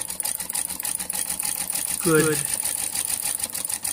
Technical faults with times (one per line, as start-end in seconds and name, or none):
1.13-3.35 doubled audio track